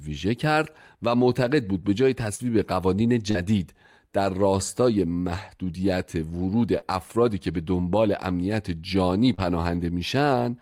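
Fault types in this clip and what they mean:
Short concealed packet loss: four times in this speech, about 40 ms of audio arrived too late to decode, at 2.35–2.42 s, 3.31–3.37 s, 6.78–6.85 s and 9.34–9.41 s. Each time the receiver bridged the hole by extending the preceding sound for about 35 ms, carrying on its pitch or a noise-like copy of it, then blending back into the real signal. Each event is heard as a brief smear or wobble in the speech.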